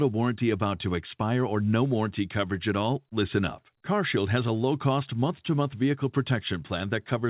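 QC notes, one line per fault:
Nothing stood out on listening to this speech, which arrives over a narrowband call path with nothing above 4 kHz.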